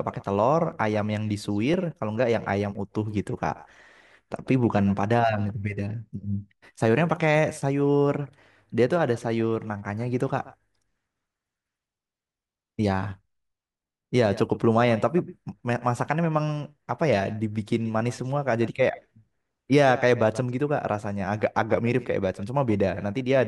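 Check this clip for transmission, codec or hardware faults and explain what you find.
One hardware fault is present: periodic USB or driver dropouts. From 0.73 to 6.81 s, a blocked driver skips roughly 10 ms every 1.01 s: regular ticks, seen as evenly spaced vertical lines on the spectrogram.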